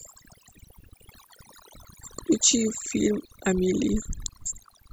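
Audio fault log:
Throughout: overdone noise removal. The background drops and breaks up into twinkling specks, because aggressive noise reduction suppressed quiet frequency bands.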